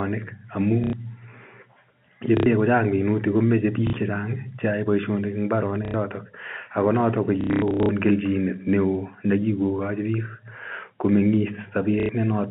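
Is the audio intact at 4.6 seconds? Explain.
Yes, the speech at 4.6 seconds comes through intact, with only the narrow band and faint level-following hiss of G.711 telephone coding.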